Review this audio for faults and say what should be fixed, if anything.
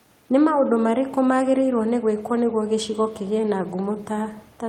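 Nothing in this recording needs fixing. No faults can be heard at any point in the audio.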